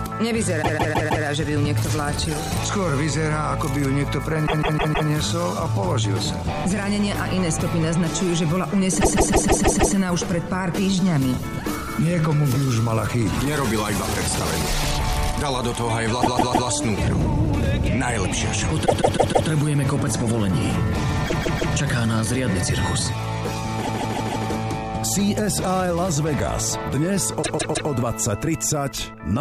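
Repeated frames: a block of about 157 ms of compressed audio was played again three to six times each at 0.62–1.24, 4.46–5.08, 9.00–9.94, 16.21–16.68, 18.85–19.48, 21.25–21.72, 23.81–24.44 and 27.42–27.89 s. Each is heard as a rhythmic stutter and adds about 0.47–0.94 s.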